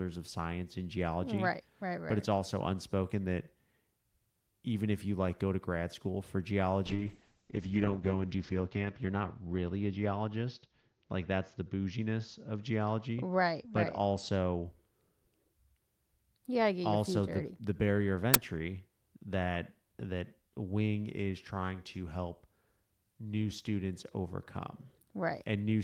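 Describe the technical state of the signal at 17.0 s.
At 17.0 s the speech signal is intact, with no audible fault at that moment.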